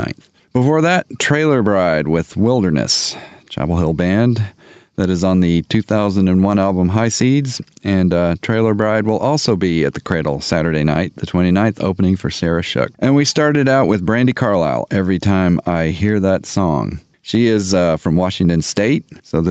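Gain pumping runs throughout the speech. The gain swings by around 10 dB. The input gain was likely set far too high, so a fast limiter clamps each peak and squashes loud and soft parts together.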